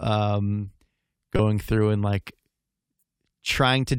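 At 1.36–1.40 s and 2.96–3.02 s, a corrupt frame decoded puts misplaced energy across a couple of frames, heard as chirpy blips and seen as short, stray spectrogram smears.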